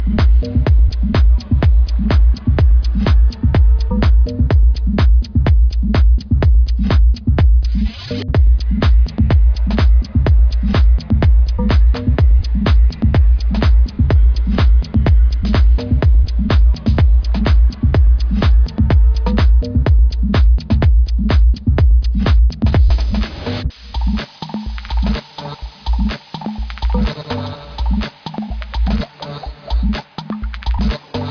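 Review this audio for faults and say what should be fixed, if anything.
No faults; nothing to fix.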